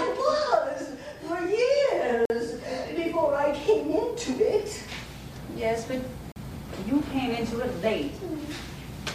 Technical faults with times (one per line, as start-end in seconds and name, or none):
2.25-2.30 gap between stream segments
6.32-6.36 gap between stream segments